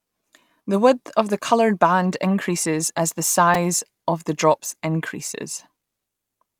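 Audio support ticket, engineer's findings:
Repeated buffer at 3.54 s, between "band increases as the" and "of the drops": brief buzz. A 2.67 ms block was replayed four extra times while new audio arrived late, which fits a 128-sample buffer. Device output underrun. Essentially no audio lost.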